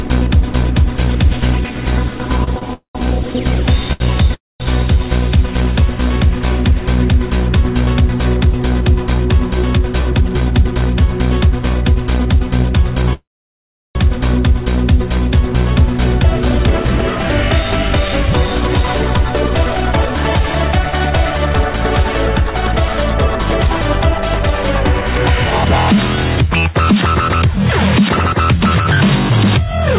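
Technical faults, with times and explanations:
2.44 s, 2.59 s and 3.93 s: short stall from a late packet. Each time a packet failed to turn up when due, the jitter buffer ran dry and the receiver stretched the last sound to cover the wait, for 30 ms, 24 ms and 74 ms. Playback then resumed from the same place, so nothing is lost, but the sound hangs on too long at each point, adding 128 ms of delay in total.
2.73 to 2.97 s, 4.34 to 4.62 s and 13.13 to 13.97 s: call audio freeze. The audio stops and holds, most likely because packets were delayed in transit and the jitter buffer emptied. The receiver fills the gaps, of 212 ms, 258 ms and 818 ms, with continued sound that fades out, leaving 130 ms, 210 ms and 720 ms of silence. When the packets arrive, playback picks up where it stopped, so a pause is inserted while nothing is dropped.
9.79 to 10.76 s and 16.55 to 29.72 s: jitter buffer speed-up. 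With more audio queued than the buffer targets after the delays, the receiver trims short pitch-period-sized pieces again and again to bring the latency back down. The pitch stays the same but the sound runs fast, at 108% in the first stretch, removing about a tenth of a second, and 107% in the second, removing about a second, which is enough to sound hurried.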